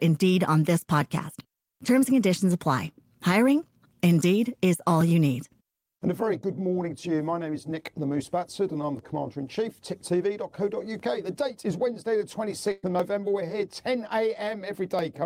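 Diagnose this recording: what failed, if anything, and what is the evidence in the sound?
Periodic USB or driver dropouts, every 2 s from about 1.0 s to 15.0 s, sit at the driver or buffer stage. Each tick is roughly a millisecond of audio skipped outright when the bus or driver stalls. The pops are evenly spaced and audible only where there is signal.

A burst of packet loss at 12.71–12.85 s is a network-stage fault. About 120 ms of audio never arrived. The receiver stretched the last sound over about 114 ms, decaying it into a held buzz or fading hiss, then resumed later with that stretch missing.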